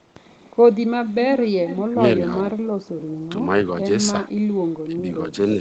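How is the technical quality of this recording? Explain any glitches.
The recording has a couple of call-type glitches. It's speech carried over what sounds like an Opus call link, with everything above 8 kHz gone, and it has two kinds of fault.

Echo leak, 1.35 to 1.5 s and 1.66 to 1.84 s: short scraps of a delayed copy of the voice trail in, roughly 365 ms behind and around 10 dB quieter. The likely cause is a far-end speakerphone whose echo canceller let some of its own loudspeaker pickup slip back down the line.

Speech suppressed in double talk, 1.9 to 1.98 s, 4.85 to 5.08 s and 5.53 to 5.59 s: the voice ducks briefly, by roughly 20 dB in the first, about 15 dB in the second, and only slightly in the last. It likely happens because the echo canceller couldn't separate the talker from the echo while both sides overlapped, so it turned everything down.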